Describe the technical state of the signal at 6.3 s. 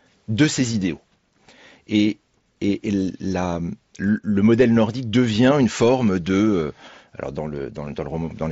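At 6.3 s the speech is intact, carried through the Bluetooth mSBC headset codec with its usual 8 kHz bandwidth limit and light grainy texture, and nothing goes wrong at that moment.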